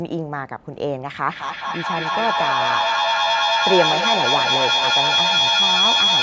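A feedback loop between two devices on the same call in one room, each trip gaining level, produces a feedback howl in this speech from 1.29 s to the end. It narrows to a tone around 3 kHz, repeats around the loop roughly every fifth of a second, and peaks about 5 dB above the speech.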